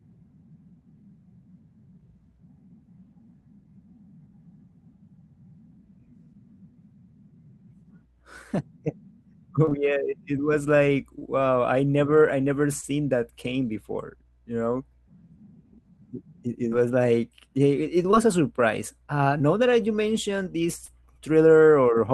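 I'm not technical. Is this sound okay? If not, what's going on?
No. The recording has short concealed packet loss at 9.65 and 9.69 s (back to back), 11.19 s (between "it was like" and "I never I never"), 12.81, 16.69 (just before "was like"), 18.11 (between "it it" and "a surprise"), 19.38 and 20.86 s. Each time about 20 milliseconds of the call arrived too late, and the receiver covered the hole by stretching the sound just before it. Unlike a dropout, there's no silence, just a quick smear or wobble.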